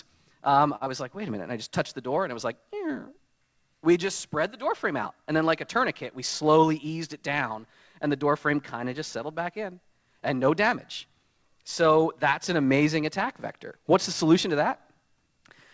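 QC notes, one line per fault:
0.76 to 0.83 s, short stall from a late packet. A packet arrived late and the jitter buffer ran dry. The receiver held the last sound for about 48 ms until the data came in, then resumed from the same point. Nothing is lost, but the sound hangs on too long. Playback runs about 48 ms later from here on. The audio has no content above 8 kHz, as through a wideband call codec.
0.85 to 0.88 s, short concealed packet loss. Right after the stall, about 20 ms of audio never reached the decoder in time. The receiver covered the gap by extending the preceding sound for about 13 ms, then blended back into the real signal. The result is a brief smear or wobble rather than a clean silence. A short sound that fell in the gap may be missing.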